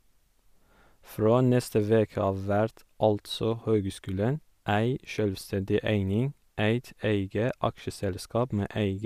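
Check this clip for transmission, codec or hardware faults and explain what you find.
Nothing faulty can be heard anywhere in this recording.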